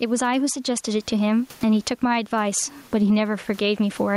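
A speech recording with gain pumping all the way through, a gain swing of roughly 15 dB. The room noise is normally about 38 dB under the speech. That's likely the input gain set far too high with a fast limiter or compressor clamping each loud sound, which leaves the whole thing sounding squashed.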